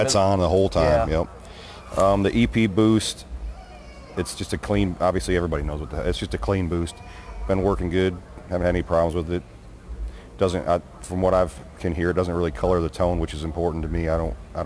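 Aliasing runs throughout. The sound points to a drop from 48 kHz to about 22 kHz with no filtering first, so content above 11 kHz folds back as unrelated tones, roughly 30 dB down. Hissy sounds turn gritty and metallic. A spectrogram shows energy jammed against 11 kHz, with mirrored streaks below it.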